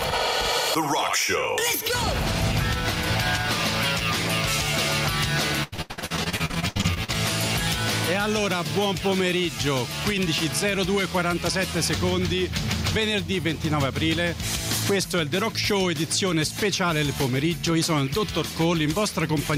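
Level pumps throughout the audio, with a swing of around 5 dB. Loud and soft parts sit closer together than they should, so the sound comes across as squashed. This is gain pumping. The likely cause is input gain set far too high for the microphone, with a fast limiter or compressor pulling the level down on every loud sound. From 5.63 to 7.10 s the sound turns choppy and robotic. This is repeated packet loss. Packets went missing or arrived late again and again. Each hole was patched by stretching the last stretch of sound forward, and the next hole came soon after. The holes come in rapid succession, and the longest runs to 86 ms. Nearly half of that span, close to 0.7 s in all, is filled-in sound rather than the real signal, so pieces of the audio are missing.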